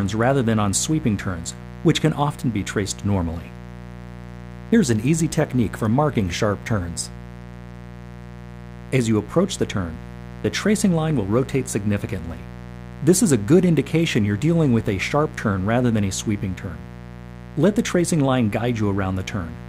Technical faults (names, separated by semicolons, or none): mains buzz